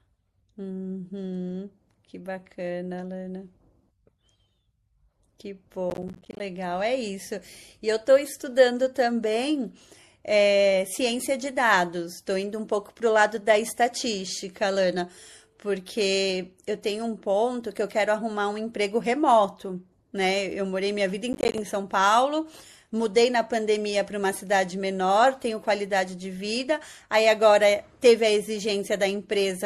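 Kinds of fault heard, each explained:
MP3 compression: throughout the speech, plainly audible codec damage that likely comes from a low-bitrate MP3 encode around 64 kbps. Starved of bits, the encoder trims the treble and lets weak frequency lines flicker between frames, giving a watery, swirly edge to sibilants and softened attacks.
processor overload crackle: from 5.9 to 6.4 s and 21.33 to 21.58 s, bursts of gritty crackle. The processor repeatedly misses its deadlines for short audio buffers, around 10 ms each, and every miss drops in a hard-edged slice of silence, many in quick succession.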